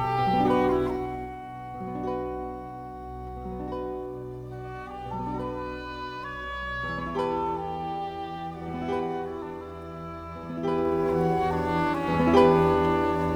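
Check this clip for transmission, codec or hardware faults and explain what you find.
One fault appears: zipper noise from 10.61 to 11.10 s. A fast ticking rides on the sound as the level changes about ten decibels, stepped in 2 dB jumps at roughly fifteen per second without smoothing.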